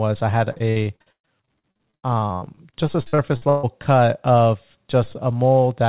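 From 0.52 to 3.65 s the speech breaks up with repeated packet loss (robotic sound). A rapid run of short holes, the longest 138 ms, is each patched by extending the preceding sound, so about a third of that stretch is filler and sounds choppy, with pieces missing. On a spectrogram this shows as smeared, repeated blocks alternating with abrupt breaks, all under a flat ceiling at 4 kHz that fits a G.711 narrowband call path.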